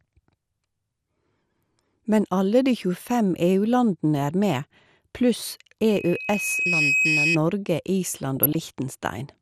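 From the start, the speech sounds dull and plainly gurgling, with a granular roughness. This is MP2 compression, likely at a low bitrate around 80 kbps. Layer II divides the signal into 32 sub-bands, and with too few bits the upper bands drop out or flicker while the remaining ones are coarsely quantised. Unlike a simple low-pass filter, the dullness fluctuates, and the grain sits on the speech itself rather than on a noise floor.

At 5.88 s a loudspeaker feedback squeal begins: a single steady tone at 2.5 kHz swells over about a second until it is roughly as loud as the speech, then stops at 7.38 s. A microphone is picking up the loudspeaker it feeds, and at that frequency the loop gain exceeds one, so the tone grows on its own. A fixed-pitch whistle that keeps rising in level marks it as feedback rather than interference or a test tone.

From 8.37 to 8.70 s comes DAB burbling, a third of a second of burbling over the speech. 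A small fraction of bit errors has slipped past the error correction into the MP2 data, corrupting samples and scale factors so that individual sub-bands jump in level frame by frame. The damage is spread across a stretch that suggests around fifteen frames. Unlike the steady codec dullness, these are sudden, bursty events confined to this short stretch.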